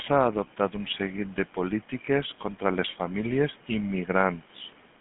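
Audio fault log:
Throughout, GSM full-rate codec: the speech was squeezed through the original GSM speech coder, which fits a 13 kbps rate, rebuilding the voice from a vocal-tract model fed by sparse regular pulses, so it takes on a plainly audible buzzy, gravelly roughness, and nothing survives above 3.6 kHz.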